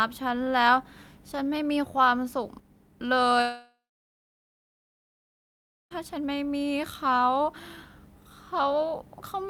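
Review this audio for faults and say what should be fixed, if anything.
One channel drops out between 2.60 and 3.00 s. One side of the stereo feed was likely lost for about 0.4 s before the mono sum, so the speech common to both channels abruptly falls by about 6 dB, and anything carried only on the missing side vanishes until the level snaps back at 3.00 s. Monitoring both input channels and alarming on a sudden one-sided loss would catch this before mixdown.

A long network dropout runs from 3.41 to 5.93 s. The stream likely stopped delivering audio for about 2.5 s, and the receiver had nothing to play. Concealment stretches the last sound into a fading buzz for roughly a third of a second, then about 2.1 s of silence follows, and the speech resumes at 5.93 s with that stretch simply gone. A more robust link with adequate jitter buffering and retransmission or redundancy would prevent this gap.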